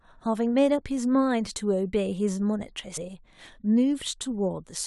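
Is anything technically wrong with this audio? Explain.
Yes. At 2.96 to 2.98 s there is a stream segment skipped. The likely cause is a segmented stream in which one segment failed to load, so the player dropped it and carried straight on with the next, splicing two points of the speech that were never adjacent. In the sound, the speech jumps abruptly forward, with a brief blip at the join lasting about 20 ms.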